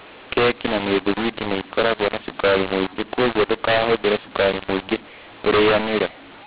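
From start to finish, a mu-law and A-law mix-up corrupts the speech: the telephone samples were encoded with A-law and decoded as mu-law. The two logarithmic curves map the same 8-bit codes to different levels, so loudness is scrambled. Some peaks jump too high, others sink, and the quietest samples are pushed well above silence. The speech turns harsh and gritty, and the pauses fill with a noisy hiss instead of going quiet.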